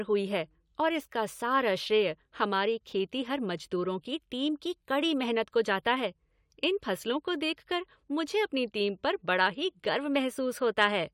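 No technical faults are audible at any point in this recording of speech, and the signal holds steady throughout.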